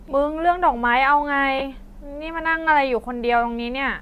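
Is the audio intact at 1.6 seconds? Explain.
No. From 1.59 to 1.61 s the speech turns briefly into a noisy smear. These are lost LE Audio frames: about 20 ms went missing, which fits two 10 ms frames. The LC3 decoder filled the gap with the last spectrum and randomised signs.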